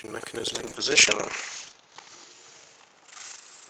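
From the start and throughout the clip there is buffer tearing. The program writing the ring buffer and the hardware reading it have slipped and cross every period, so roughly a third of each buffer replays audio from about 70 ms earlier. The hard joins produce a 25 Hz robotic rattle that follows the signal and vanishes in gaps, unlike a steady electrical hum.

From 0.5 s to the end, a call bitrate drop sets in. The bandwidth estimate fell, and the encoder was starved of bits. The top end narrows from 20 kHz to 8 kHz, and the sound turns muffled and watery, worst for about 1.24 s, which fits a fall from roughly 48 to 8 kbps. Unlike the tearing, it is a smeared coarseness rather than a periodic rattle.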